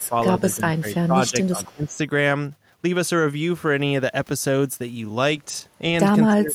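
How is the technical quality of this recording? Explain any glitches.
Not great. It's a speakerphone-style call where the echo canceller is struggling, so you get both echo bleeding through and the talker getting squashed.

Echo leak shows up from 0.0 to 0.08 s, again from 0.4 to 0.56 s, and for a longer stretch from 0.91 to 1.97 s. It's a faint delayed copy of the speech trailing about 261 ms behind, around 40 dB down at first and then about 30 dB down. The likely cause is the far end's loudspeaker feeding its mic, with the canceller not fully scrubbing it out before sending it back.

Speech suppressed in double talk hits at 0.08 to 0.15 s (a dip of about 10 dB) and across 0.55 to 2.01 s, where roughly 0.7 s of it gets pulled down by up to about 15 dB. The worst is from 6.24 s to the end, about 25 dB down. The likely cause is the canceller seeing both sides active, not trusting which is echo, and ducking everything, so the talker sinks and loses presence.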